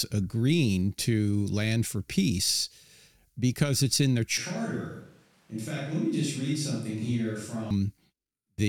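Speech, with a switch to a distant microphone from 4.38 to 7.71 s, just after "because it's in their": the sound abruptly turns hollow and roomy, thinner in the bass and about 5 dB quieter. A faint noise floor appears, the waveform steps down, and the spectrogram loses low-frequency energy, likely because the close microphone dropped out.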